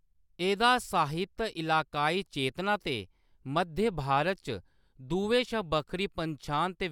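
No technical faults can be heard anywhere in the speech.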